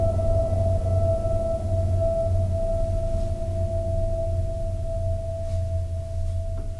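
No technical faults can be heard anywhere in this music clip.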